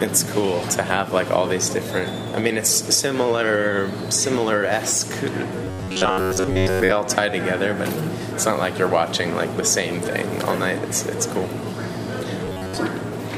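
Robotic sound from repeated short buffers occurs at 5.64 to 6.91 s and 12.45 to 12.77 s. A rigid, metallic buzz at 93.8 Hz stands in for most of the audio, likely from a buffer of about 10.7 ms being replayed. Unlike dropouts, it leaves no silent gaps.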